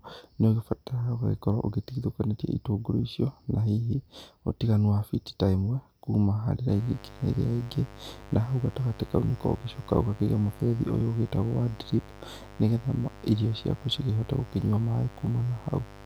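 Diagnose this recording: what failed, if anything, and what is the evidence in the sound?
Analogue wiring let in 50 Hz mains spikes, causing a raspy mains buzz about 20 dB below the speech from 6.69 s, after "ta ĩmwe kuuma harĩ", to the end.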